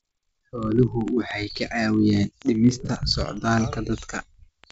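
From 0.11 to 4.71 s there are word clock ticks: sharp clicks about every 20 ms, each a one-sample slip between unlocked clocks roughly 0.1% apart.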